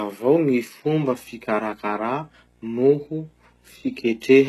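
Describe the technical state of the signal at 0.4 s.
At 0.4 s the signal is most likely passing through HE-AAC compression at a very low rate, which fits around 16 kbps, and it stays that way throughout the clip. The codec keeps only the lower spectrum and rebuilds the treble by copying lower bands upward under a coarse envelope, with nothing above about 12.3 kHz. The rebuilt treble's harmonics don't line up, so s sounds come out gritty, metallic or lispy.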